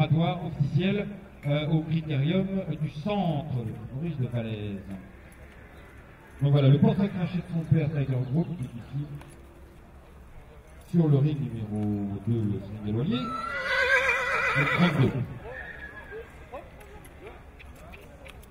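Nothing goes wrong anywhere in this recording, so there's nothing here to flag.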